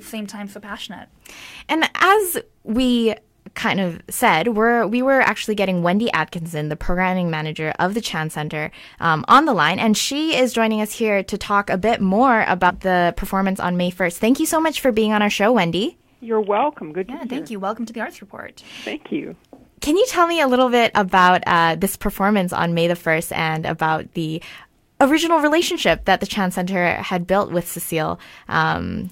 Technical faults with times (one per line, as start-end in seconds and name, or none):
12.69-12.71 compressed frames skipped